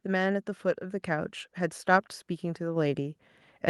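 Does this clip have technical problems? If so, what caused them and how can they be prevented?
Yes. Microphone volume stepped up at 1.02 s and again at 2.76 s. The call software judged the input too quiet and raised the device's input gain in single steps, by about 5 dB and then about 4 dB, so the speech and background get louder together at each point. To prevent this, turn off automatic microphone gain adjustment and set a suitable input level manually before the call.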